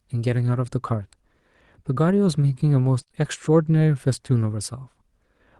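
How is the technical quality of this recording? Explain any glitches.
The recording has one cluster of network damage near 3.0 s, sounding through an Opus call path at about 40 kbps whose content stops near 12 kHz.

From 3.01 to 3.08 s, a burst of packet loss drops about 60 ms. The receiver extends the last sound and fades it down. A spectrogram shows a smeared, decaying patch, and the waveform shows a sagging envelope.

Two short concealed packet losses follow, from 3.08 to 3.12 s and from 3.12 to 3.16 s. Each loses 20 ms of audio, filled with about 14 and 18 ms of extrapolated sound, heard as a brief wobble and seen as a blurred spectral patch.

At 3.16 s, a lost packet rebuilt from error correction plays a rougher, noisier 20 ms low-bitrate copy. The spectrogram shows grainier texture.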